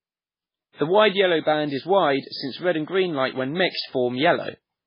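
From start to finish the speech sounds dull and watery, with nothing above 5.3 kHz and faint detail swirling in and out. That is likely heavy MP3 compression: the encoder cuts the treble and drops weak frequency lines, which fits a bitrate near 16 kbps.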